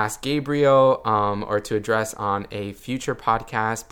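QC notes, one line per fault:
Nothing stood out on listening to this speech clip.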